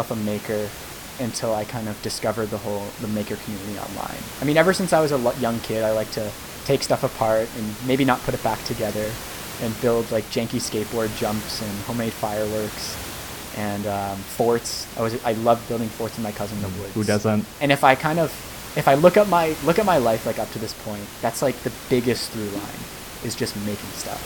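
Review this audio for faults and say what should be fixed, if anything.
Nothing stood out on listening to this speech recording, so there is nothing to fix; the room noise, about 13 dB below the speech, comes from the recording space rather than the system.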